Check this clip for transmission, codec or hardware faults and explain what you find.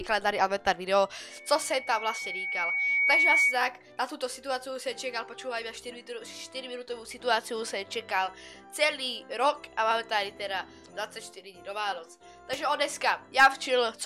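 One fault is present: loudspeaker feedback squeal from 1.30 s to 3.62 s. A microphone is picking up the loudspeaker it feeds, and at 2.2 kHz the loop gain exceeds one, so a pure tone swells over about two seconds until it sits roughly 10 dB above the rest of the audio.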